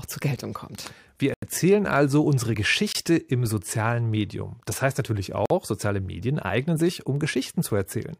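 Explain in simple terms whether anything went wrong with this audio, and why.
Yes, two kinds of fault occur. The first is a block of digital silence. The sound briefly drops to nothing at 0.36 s, 1.34 to 1.42 s just before "erzählen also", 2.93 s, and 5.46 to 5.50 s just after "heißt natürlich". The program likely didn't deliver audio in time.

The second is compressed frames skipped. At 2.53 s, just after "erzählen also", about a twentieth of a second of speech is missing. Damaged or lost chunks of the file weren't played. The audio jumps ahead.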